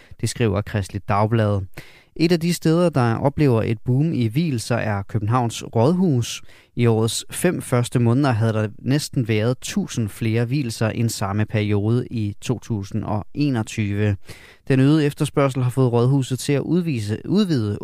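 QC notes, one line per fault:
No technical faults are present in the speech signal.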